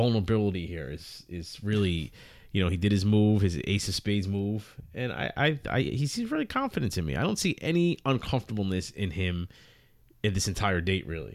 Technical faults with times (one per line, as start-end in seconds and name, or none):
none